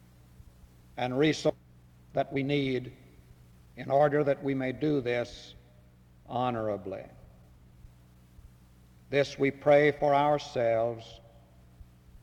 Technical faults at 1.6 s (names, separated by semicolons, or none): skip ahead